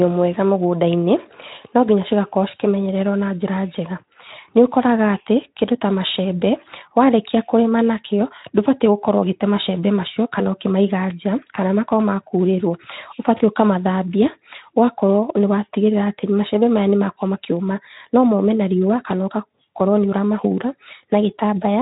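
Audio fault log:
Nothing stood out on listening to this speech clip.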